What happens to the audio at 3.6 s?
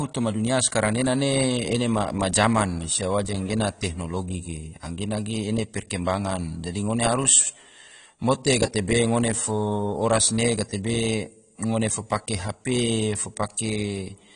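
At 3.6 s the speech sounds dull and smeared, with a warbling, fizzy texture on sustained sounds and sibilants, and nothing at all above about 10.1 kHz. This is AAC compression, present from start to finish rather than just at this moment. The likely cause is AAC-LC coding at a low bitrate, which fits around 32 kbps: the encoder lowers its cut-off and quantises each frame's spectrum so coarsely that bands drop out or are filled with substitute noise.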